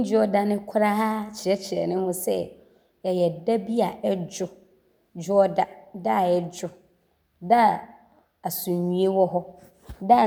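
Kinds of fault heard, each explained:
No technical faults are audible anywhere in this speech recording.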